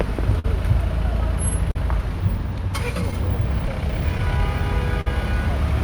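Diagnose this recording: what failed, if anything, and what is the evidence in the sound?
Network stage: clock drift between sender and receiver. The sender's clock runs slow, by around 4 percent, against the receiver's. Samples arrive slightly too slowly to match playback. The jitter buffer keeps draining, and this shortfall drives the repeated timing corrections in these everyday sounds.

Buffer stage: repeated timing corrections. From 0.03 to 4.39 s, the receiver keeps repeating tiny slices to stretch the audio. Playback runs at about 99 percent speed. Roughly 40 ms is added in total.

Buffer stage: short stall from a late packet, three times. The stalls fall at 0.39 to 0.45 s (50 ms held), 1.71 to 1.76 s (40 ms) and 5.01 to 5.07 s (50 ms). Each time the buffer ran empty. The last sound is held, then resumes without loss.

Network stage: scattered short gaps. Between 3.11 and 4.20 s, about four brief holes appear, the longest around 15 ms. 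Each is patched by continuing the previous sound. Roughly 4 percent of that span is concealed. Nothing is lost, and the patches are small ticks and smears.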